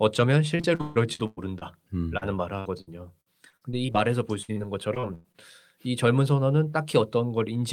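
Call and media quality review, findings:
Choppy, robotic speech with pieces missing at 0.55–1.63 s, 2.59–3.96 s and 4.94–5.36 s. Repeated packet loss: jitter buffer or decoder patching 7, 8 and 4 gaps by extending the last sound.

Brief smear at 2.17–2.23 s and 4.52–4.58 s. Short concealed packet loss: about 40 ms filled from the preceding sound, then blended back.

Held, decaying fill at 4.42–4.50 s, then speech resumes further on. Burst of packet loss: a 60 ms gap concealed with the last sound fading.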